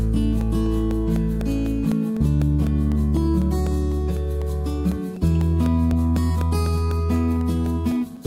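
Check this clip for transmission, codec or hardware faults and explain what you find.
One hardware-side fault is present: periodic USB or driver dropouts from 0.16 s to 8.17 s, repeating every 0.25 s, about thirty in all. Each time the bus or driver stalls, roughly a millisecond of audio drops to silence, giving evenly spaced ticks that sound only while signal is present.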